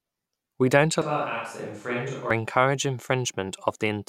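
From 1.02 to 2.31 s the speech turns roomy, hollow and thin. It drops about 10 dB, with faint room noise. A likely switch to a distant microphone.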